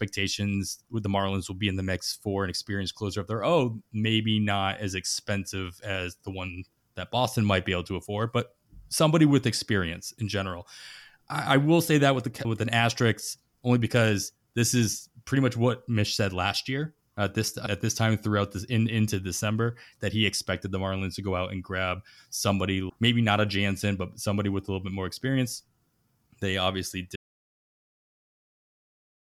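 An audio dropout to silence begins at 27.16 s and runs to the end of the clip, about 2.2 s later. The speech cuts off mid-flow and everything after it is dead silence, with no room tone or background left underneath. The likely cause is that the input signal was lost, through a disconnected device, a failed link or an accidental mute, while the recording carried on writing silence. Whatever was said in those final seconds is gone.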